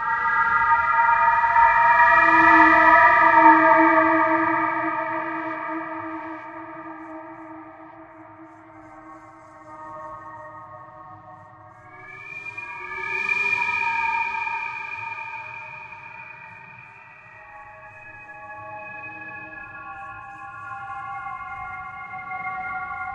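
No technical faults heard anywhere in this recording of sounds; nothing to log.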